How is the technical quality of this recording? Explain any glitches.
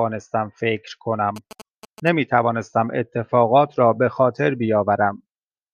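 The recording has one fault: GSM signalling bursts from 1.36 to 2.09 s. A 2G mobile phone close to the recording chain is exchanging brief signalling bursts with its network, with no call audio. The audio circuitry rectifies that radio energy and turns it into sound. The result is a galloping dit-dit-dit of short buzzes. The buzzes pulse at 217 Hz, sitting roughly 20 dB below the speech.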